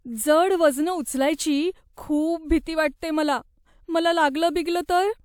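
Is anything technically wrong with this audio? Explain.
No, nothing technically wrong can be heard in this speech recording.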